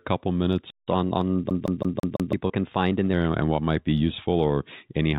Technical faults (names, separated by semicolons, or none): playback stall; catch-up at higher speed; CD stuck on one turn; packet loss with pitch repetition